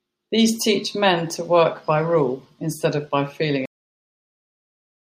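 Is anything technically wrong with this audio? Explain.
Yes. At 3.66 s, right after "instead of by feeling", the speech stops mid-sound into dead digital silence with no decay: a cut-off end, where the final buffers were never written.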